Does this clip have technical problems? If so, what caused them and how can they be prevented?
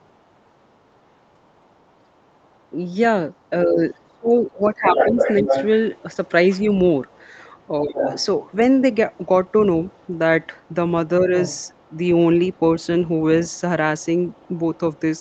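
Yes. A second voice leaks through, very faint from 0.0 to 2.69 s, 3.37 to 3.49 s and 13.45 to 15.21 s, but nearly as loud as the talker from 4.64 to 12.86 s. This is other side's voice leaking through, likely residual loudspeaker echo that the echo canceller failed to remove. Using a headset or a better-tuned echo canceller would prevent it.

The talker's voice also dips sharply from 3.5 to 5.51 s, and more lightly at 7.82 to 8.05 s and 11.21 to 11.33 s, while the other side plays on the loudspeaker. This is speech suppressed in double talk, likely the canceller turning everything down when both sides spoke at once. Better double-talk detection, or a headset that removes the echo entirely, would prevent it.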